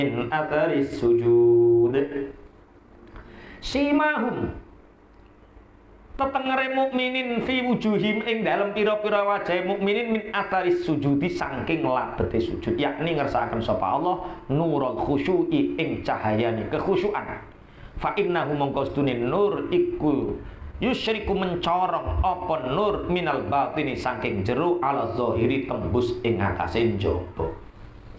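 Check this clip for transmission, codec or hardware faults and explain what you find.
Checking this clip turns up no faults to explain.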